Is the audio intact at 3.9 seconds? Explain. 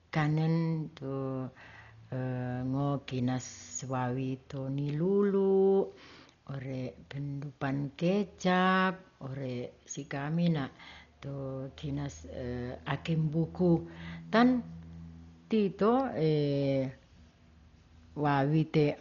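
No. Heavy damage, likely from Dolby Digital compression at what sounds like about 40 kbps, runs throughout, including 3.9 s. Narrowed band and noise-filled lines make the speech dull and rough; a spectrogram shows nothing above 6.9 kHz.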